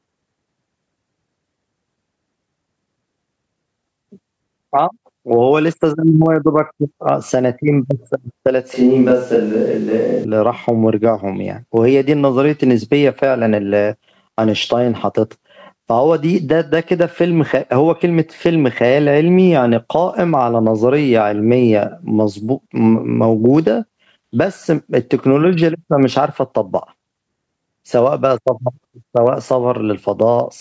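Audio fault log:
throughout: gain pumping. The gain is pulled down on every loud sound, a swing of around 10 dB, bringing loud and soft parts closer in level and leaving the speech squashed. This is likely a fast limiter reining in gain set far too high for the microphone.
8.74–10.24 s: switch to a distant microphone. The speech turns abruptly roomy and hollow, thinner in the bass, with faint room noise well below it. The level barely changes, and the close sound returns just as suddenly. A farther-off microphone likely stood in briefly.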